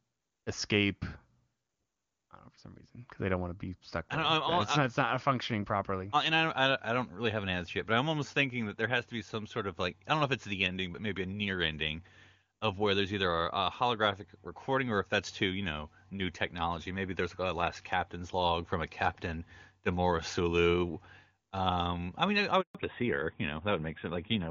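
At 22.61 s, right after "I mean I", the speech cuts out. This is a handover gap. The call was passed from one network to another, and no speech frames came through during the switch. The sound fades within a few tens of milliseconds and then goes silent. The silence lasts 140 ms, until 22.75 s. Whatever was said in that stretch is gone.

When the speech returns at 22.75 s, it has changed. This is a fallback to narrowband. Before the gap, the call ran on the AMR wideband (HD Voice) codec, which fits its top rate of about 23.85 kbit/s. Its upper range sounded clear, with faint codec damage at most. After the gap, the call continues on AMR narrowband, which fits its 12.2 kbit/s mode. Nothing above 4 kHz gets through. The voice sounds duller and rougher from there to the end.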